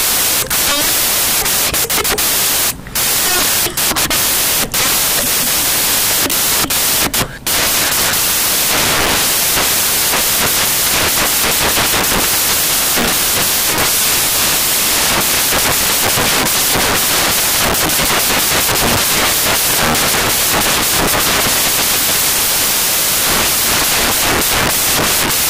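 From the first instant to the end, the audio is buried under loud, hissing white noise, the sign of samples built from the wrong bytes. Each sample has been reassembled from mismatched bytes, whether shifted by one, reversed in order or misaligned, so the rapidly fluctuating low-order bits now form the dominant part of every value.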